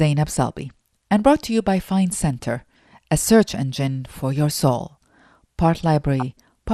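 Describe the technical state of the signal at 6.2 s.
At 6.2 s there is a short burst of DAB burbling, from 6.20 to 6.22 s. Bit errors slip past the error correction and land in the MP2 data. Damaged samples put short blips of noise in single sub-bands, and damaged scale factors make sub-bands jump in level. The span points to about two corrupted frames at a low error rate, around a tenth of a percent. It sounds like a few brief watery blips over the speech.

Underneath, the speech carries MP2 compression throughout, so it is present here too. The dull, gurgling, granular texture is plainly audible. The likely cause is MPEG Layer II coding at a low rate, consistent with about 80 kbps. With too few bits, upper sub-bands drop out and flicker. The remaining bands are coarsely quantised. That removes brightness and leaves a grainy edge.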